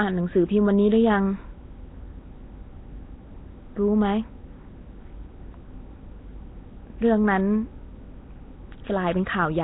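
Throughout the speech, a grainy, hissing fringe surrounds the sound, which has a blurred, submerged quality and nothing above about 3.9 kHz. This is likely Nellymoser compression. Coarse fixed bit allocation leaves weak bands noise-filled, and the heavy damage fits roughly 16 kbps.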